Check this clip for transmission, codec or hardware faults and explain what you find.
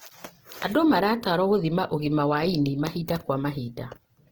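One codec fault runs throughout. From start to end the speech sounds grainy, rough and noisy. This is likely Opus compression in its music mode at a low bitrate, around 16 kbps, filling starved bands with noise while bandwidth stays full.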